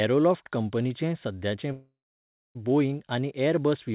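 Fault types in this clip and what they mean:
Call audio freeze: from 1.72 s to 2.57 s the speech stops and the gap is filled with a continuation of the last sound, a buzz or hiss that fades, then roughly 0.6 s of silence before the speech resumes where it left off, with nothing lost. The likely cause is packets held up in transit, draining the jitter buffer so the receiver concealed the wait, adding about 0.83 s of delay to everything after it.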